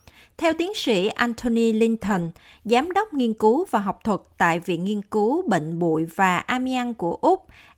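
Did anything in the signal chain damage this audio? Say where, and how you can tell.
Yes. From 2.05 to 2.27 s, just before "giám đốc nghiên cứu", the speech turns rough and noisy without dropping out. This is a lost packet rebuilt from error correction: at the network stage, several packets went missing, and the decoder played the lower-bitrate copies carried in the following packets.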